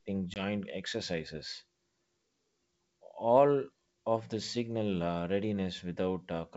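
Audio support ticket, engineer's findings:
Packet loss on the ADPCM call, 0.34 to 0.43 s: 20 ms silent gap, consistent with one dropped packet. Decoder predictor and step size desynchronised, causing slightly distorted speech until recovery.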